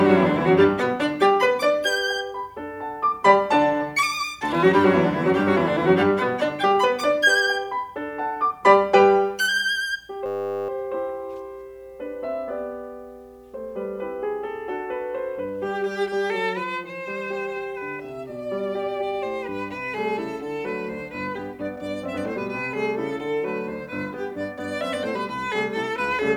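Music in which the system hung at 10.26 s, and the sound hardware kept replaying one 10 ms stretch of its ring buffer until 10.69 s. This system hang loop repeats over forty times, producing a steady 100 Hz buzz, with essentially nothing missing afterward.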